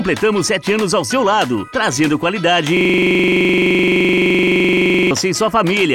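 At 2.77 s the audio locks into a system hang loop until 5.11 s. The system froze while the hardware kept replaying one 42.67 ms slice of its buffer, which fits a 2048-sample buffer. It repeats 55 times at 23.4 Hz. The result is a rapid, rattling stutter.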